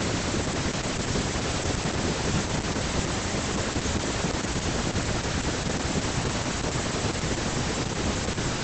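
Throughout the speech, Opus voice compression is audible: the SILK linear-prediction coder runs in wideband with nothing above 8.7 kHz, and heavy, coarse excitation coding, consistent with roughly 10 kbps, leaves the speech muffled, hoarse and slightly robotic.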